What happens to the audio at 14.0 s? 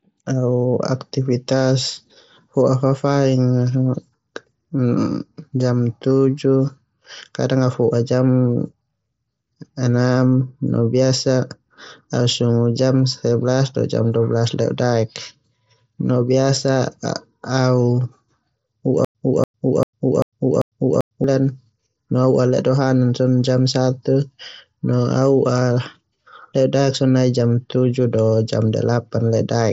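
Nothing goes wrong at 14.0 s: the speech there comes through intact over the Bluetooth mSBC headset codec, which passes nothing above 7.7 kHz.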